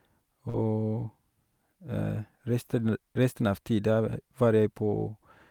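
At 0.49 to 0.56 s comes a short concealed packet loss: 40 ms of the call arrived too late, and the receiver bridged the gap by extending the preceding sound, then blended back. It is a brief smear, not the hard silence of a plain dropout.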